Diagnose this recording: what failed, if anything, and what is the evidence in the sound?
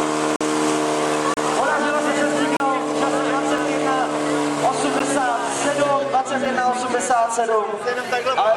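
Driver or buffer stage: output buffers went unfilled, leaving hard-edged blocks of digital silence at 0.36 s (46 ms, fits 2048 samples), 1.34, 2.57, 3.58, 4.99 and 6.45 s.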